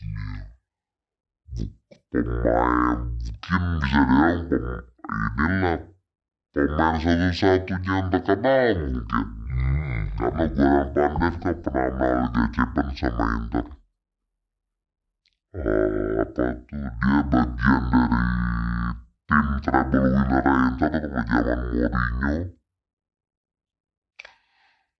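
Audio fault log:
Throughout: wrong sample rate. The speech runs at half speed and sits a full octave low, so it sounds slow, deep and drawn out. This fits audio made at 44.1 kHz being played back at roughly 22 kHz with no conversion. A pitch shift would lower the sound but keep the timing, and a time-stretch would slow it but keep the pitch. Here both change together by exactly the same factor of two, which points to the wrong sample rate.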